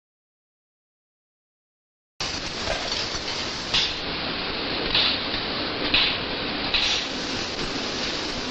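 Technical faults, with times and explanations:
0 to 2.21 s, audio dropout to silence: The clip opens in a gap that is already under way. It is silence, with no room tone at all. The likely cause is a lost input while the recorder kept writing silence. Sound returns abruptly at 2.21 s.
3.78 to 6.95 s, digital radio blending to analogue: The receiver loses the digital stream and cross-fades to the AM broadcast over about 262 ms. Level shifts by about 1 dB. Faint hiss sits roughly 35 dB down.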